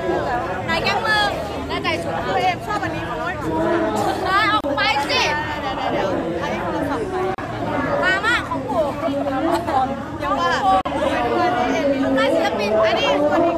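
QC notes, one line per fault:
4.61–4.64 s, 7.35–7.38 s, 10.81–10.85 s: gap at a join of encoded pieces. Each time, continuous sound breaks off for about 33, 35 and 42 ms, then resumes where it stopped. These are joins between separately encoded pieces, where encoder start-up delay and end-frame padding were left untrimmed.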